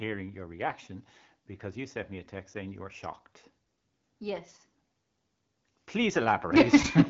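No faults found; the speech is band-limited to about 7.3 kHz, as expected from an AMR wideband (HD Voice) path running at 12.65 kbit/s.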